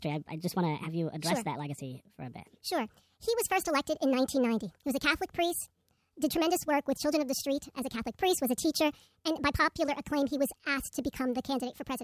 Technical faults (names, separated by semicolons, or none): wrong sample rate